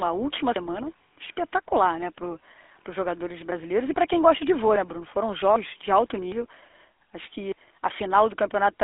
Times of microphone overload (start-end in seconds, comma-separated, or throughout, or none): none